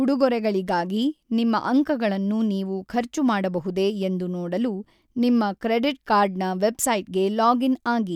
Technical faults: none

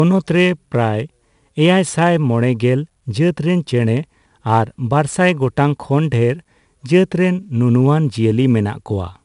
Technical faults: 4-bit ADPCM compression

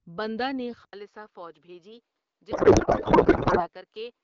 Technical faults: input switched to a poorer device; codec payload misread

